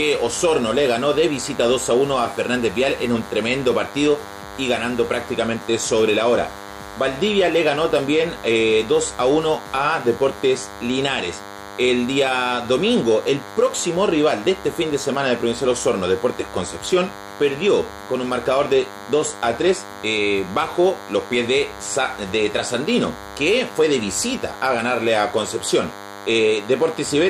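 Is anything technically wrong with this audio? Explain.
Yes. A thin, steady buzz at 100 Hz, rich in harmonics, runs under the sound from start to finish, sitting roughly 15 dB below the signal. This is DECT cordless phone buzz: a nearby DECT handset or base station transmits a brief radio burst every 10 ms, and the audio circuitry rectifies that interference. Each burst becomes a short pulse, and the 100 Hz repetition rate becomes the buzz's fundamental.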